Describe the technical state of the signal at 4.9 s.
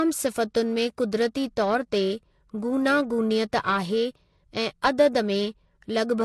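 At 4.9 s the speech shows two faults, and both run through the whole clip rather than starting there.

The first is heavy lossy coding, likely MP3 compression. Nothing is left above 10.6 kHz, so the treble sounds dull and clipped off. The damage is plainly audible. The encoder had too few bits, so weak frequency lines drop in and out between frames. That gives a watery, swirling texture and chirpy s sounds. The degree of loss fits a low bitrate of around 40 kbps.

The second is periodic clock jitter. The converter's clock is being wobbled at about 1 kHz. Each component of the speech picks up sidebands roughly 1 kHz above and below it. Higher components are hit hardest. The result is a rough, metallic edge on the speech. It disappears in the pauses, because silence has nothing to modulate.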